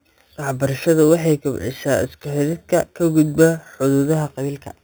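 Imaging from sample-and-hold upsampling runs throughout this speech clip. The sound appears to have been raised from a low rate, which fits an 8 kHz original taken up to 44.1 kHz, by holding each sample with no smoothing. That leaves mirrored copies of the spectrum, the first filling roughly 4 to 8 kHz at about 20 dB below the speech. It is heard as a bright metallic fizz that rises and falls with the voice.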